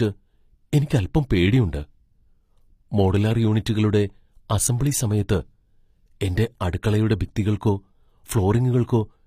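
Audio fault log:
Throughout, HE-AAC compression: speech treble sounds gritty and metallic, and nothing reaches above 15.5 kHz. Likely treble rebuilt from copied lower bands, fitting about 24 kbps.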